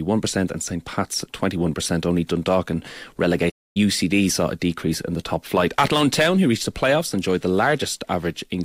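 At 3.49 s a playback stall, likely data starvation, silences the speech for 0.26 s: a flat waveform and blank spectrogram gap before "saw a decrease in".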